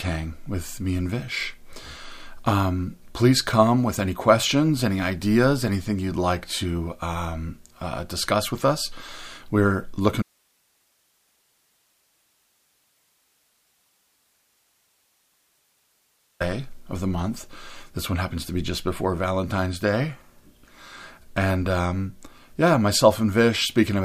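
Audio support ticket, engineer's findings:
Audio dropout to a faint residue, 10.22 s to 16.40 s. Signal cuts out abruptly mid-flow and returns just as suddenly after about 6.2 s. Gap not silent: steady hiss only, roughly 45 dB below programme level. No fade, so not a pause. Likely an upstream source or link losing the feed while the downstream input and preamp stay live, passing their own noise floor through the break.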